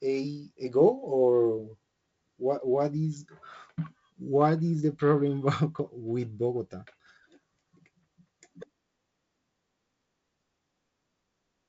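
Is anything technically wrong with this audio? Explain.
No, nothing is technically wrong with this audio.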